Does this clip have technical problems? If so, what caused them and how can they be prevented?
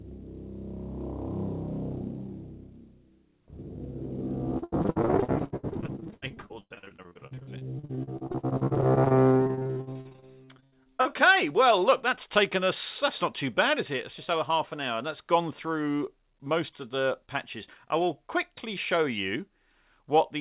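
Yes. From 4.58 to 11.07 s the sound turns choppy and robotic. This is repeated packet loss: many gaps, up to 100 ms each, patched by stretching the preceding sound. A steadier network connection with a larger jitter buffer and forward error correction would prevent it.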